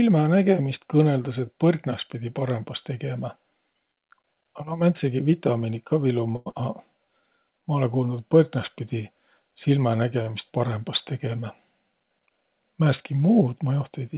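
A speech recording carried over a call path, band-limited with nothing above 4 kHz, which fits G.711 mu-law at 64 kbps. It has several jitter-buffer faults. Two short stalls from a late packet occur, at 6.36 to 6.49 s and 10.22 to 10.30 s. Each time the buffer ran dry and the receiver held the last sound, for 99 ms and then 45 ms, before resuming where it left off. Nothing is lost, but a sound lingers unnaturally. On a spectrogram this shows as flat, repeated harmonic bands, and on the waveform as a run of near-identical cycles. Right after the first stall, a skip ahead at 6.50 to 6.56 s drops roughly 70 ms as the buffer sheds the built-up delay. The playback jumps straight to later audio, which appears as an abrupt splice where the spectral pattern changes discontinuously. A jitter buffer slow-down from 6.97 to 7.23 s repeats pitch periods to rebuild the reserve, adding 52 ms and playing at 83% speed at unchanged pitch. 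The spectrogram shows stretched formants with evenly spaced harmonics, and the waveform shows periodic, cloned cycles.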